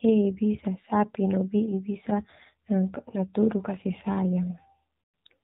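From start to finish the speech carries AMR narrowband mobile codec damage, plainly audible. Nothing above 4 kHz survives, and the low bit budget, which fits about 7.4 kbps, leaves a buzzy, synthetic vocal-tract rebuild. That buzz, rather than simple muffling, separates it from plain low-pass filtering.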